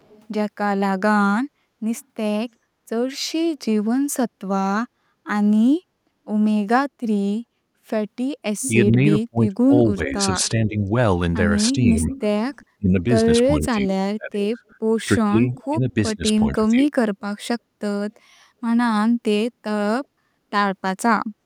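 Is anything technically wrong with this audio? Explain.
Yes. There are two related faults.

Echo leak is heard at 0.0 to 0.26 s, 1.97 to 2.05 s, 8.61 to 8.69 s, 10.09 to 10.14 s, 12.1 to 12.66 s and 14.7 to 15.64 s. A delayed copy of the speech returns about 380 ms late. The far side likely plays the call on a loudspeaker, and its echo canceller let part of it back through. Some scraps are very faint. Others, near 8.6 s and 12.1 s, sit only about 10 dB below the speech.

Speech suppressed in double talk runs between 8.68 and 16.88 s. Both sides talk at once here. The echo canceller likely cannot tell the local talker from the loudspeaker echo, so it turns both down. The talker's speech dips and breaks up in pieces, about four seconds in all. At its worst the level falls by roughly 25 dB.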